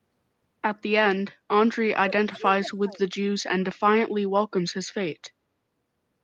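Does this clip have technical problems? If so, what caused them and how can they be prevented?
Yes. From 1.79 to 3.0 s the speech is suppressed in double talk: the level dips, at worst by around 35 dB, for about a second in total. On a waveform the envelope collapses in uneven notches; a spectrogram shows the energy thinning or vanishing across bands. The likely cause is an echo canceller that, with both ends talking, mistook the local speech for loudspeaker echo and attenuated it. Tuning the canceller's double-talk detection, or having participants use headsets, prevents this.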